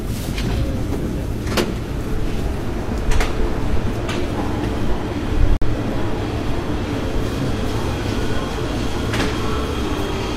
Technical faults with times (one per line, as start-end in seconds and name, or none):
5.57-5.62 gap between stream segments